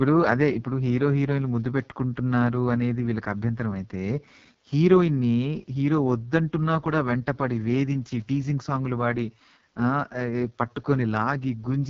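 From start to finish the speech runs through an AMR wideband (HD Voice) codec at what sounds like its lowest rate, around 6.6 kbit/s, leaving it rough and raspy. A spectrogram shows smeared harmonics, noise-like filling up top, and nothing above 7.4 kHz.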